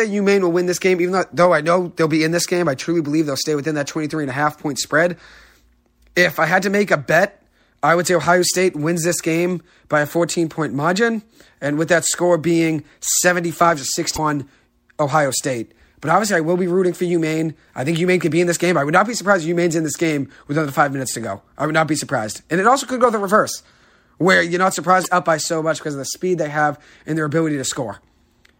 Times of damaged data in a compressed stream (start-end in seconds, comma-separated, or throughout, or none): 14.15-14.19, 25.01-25.06